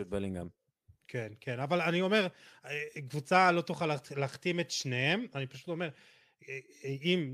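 Listening through the speech, nothing stood out as a technical fault at any point.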